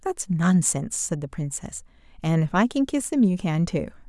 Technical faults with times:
none

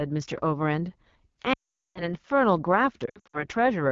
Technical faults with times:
0.00-3.92 AMR wideband (HD Voice) codec
1.53-2.14 lost AMR speech frames
3.05-3.45 lost AMR speech frames

